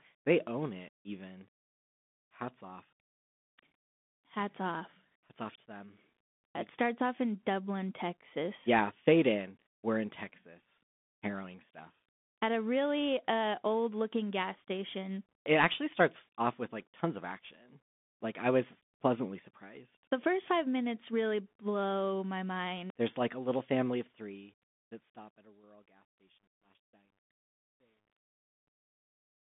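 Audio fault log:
throughout: Bluetooth CVSD headset codec. The speech has passed through a narrowband headset link that encodes each sample as a single up-or-down bit with an adapting step, which fits a 64 kbps CVSD stream. The band runs from 200 Hz to 3.6 kHz with nothing above 3.8 kHz, so the speech sounds thin and muffled. Where the step cannot keep up, loud high sounds distort and s sounds turn scratchy, and a grainy hiss sits under the speech; the damage is plainly audible. A smooth fade-out runs from about 23.5 s to 29.5 s.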